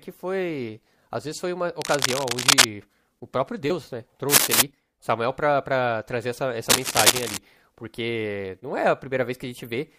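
Cable scratch noise bursts over the speech at 1.80–2.68 s, 4.29–4.62 s (about 10 dB above it) and 6.69–7.38 s, likely from a worn connector's fluctuating contact resistance.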